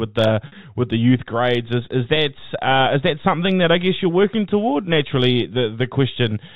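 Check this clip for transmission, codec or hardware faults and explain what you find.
Two short dropouts stand out, both packet loss with pitch repetition. From 0.47 to 0.52 s about 50 ms of audio went missing, and at 2.16 s a further 10 ms. The receiver bridged each gap by repeating the last pitch period, so both spots sound like a briefly held, buzzy tone before the speech carries on. Beneath this, the G.711 A-law telephone coding keeps everything below 4 kHz.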